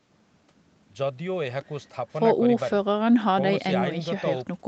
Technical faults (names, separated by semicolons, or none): none